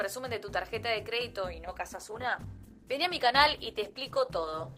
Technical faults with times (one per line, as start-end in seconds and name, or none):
1.67-4.78 adaptive stream at a lower bitrate